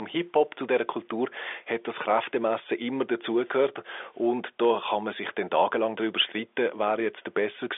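No technical faults are present.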